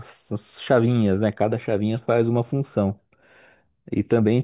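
A speech recording with nothing technically wrong with it.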